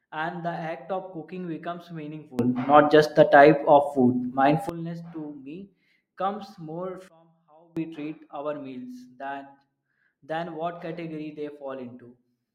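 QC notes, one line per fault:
2.39–4.69 s, sudden gain jump: right after "act of cooking becomes" the level leaps up by about 19 dB and drops back just as abruptly, likely from a gain setting applied instantly with no ramp. Speech and background noise rise together. On the waveform this shows as a block of sharply taller amplitude with vertical edges, and on the spectrogram as a uniformly brighter band across all frequencies.
7.08–7.77 s, sudden gain jump: after "comes more" the level falls by about 24 dB for under a second, then returns, likely the same unramped gain change in the opposite direction. The sound and noise floor drop together. On the waveform this is a squat, flattened section with hard edges, and on the spectrogram a dark vertical gap.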